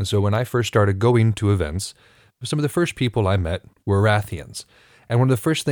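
Nothing in the speech stood out as a technical fault on listening.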